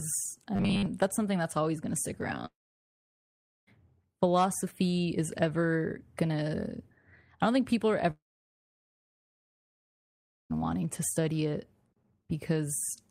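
From 0.56 to 0.87 s, just before "that's something that's always", the speech turns into a rigid, metallic buzz pitched at 100 Hz. This is robotic sound from repeated short buffers, likely caused by audio arriving too seldom, so most of that stretch is a 10 ms piece played over and over.

The speech cuts out twice and returns with a gap. After "always going to stick" it goes silent from 2.45 to 3.69 s and resumes at "philosophy is ever". After "don't think people are" it is silent from 8.11 to 10.52 s and resumes at "wanting to study it". Both are long network dropouts, likely from no packets arriving, with about 1.2 s and 2.4 s of audio missing.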